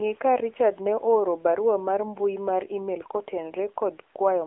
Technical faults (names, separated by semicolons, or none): AMR narrowband mobile codec